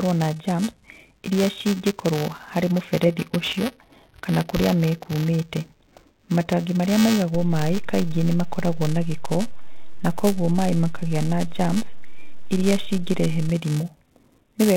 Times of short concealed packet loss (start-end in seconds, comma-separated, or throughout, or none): none